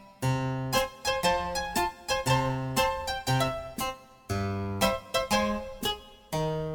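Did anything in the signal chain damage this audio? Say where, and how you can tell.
Yes, at the converter: sample clock jitter from 1.64 s to the end. A rough hiss rides on the music, roughly 25 dB below it, swelling on loud, bright passages. Its signal-dependence, not a steady noise floor, points to an unstable clock with timing errors of a few microseconds.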